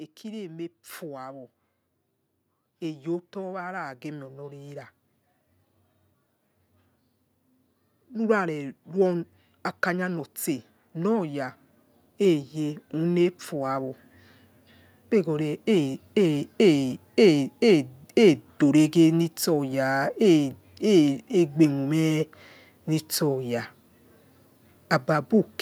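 From 2.66 s to 4.89 s the level climbs by about 5 dB as automatic gain rising sets in: the gain control judged the input too quiet and pushed its gain up gradually, so speech and background noise swell together. A second, longer rise runs from 8.09 s to 16.07 s, adding about 11 dB over roughly eight seconds. The noise floor lifts along with the speech.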